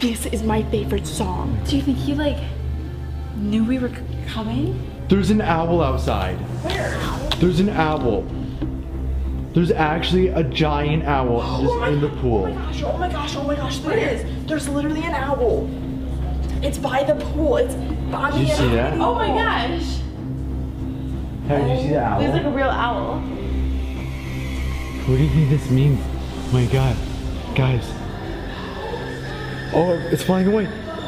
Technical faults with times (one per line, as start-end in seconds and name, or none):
none